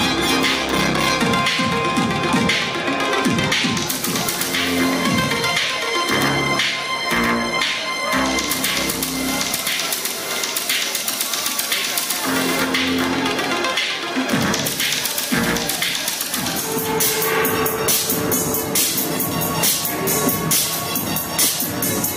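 Two sharp single clicks occur, at 15.77 s and 17.36 s, each a thin vertical line across the spectrum. The likely cause is dropped samples: a fraction of a millisecond missing from the stream, so the waveform jumps abruptly without removing any audible sound.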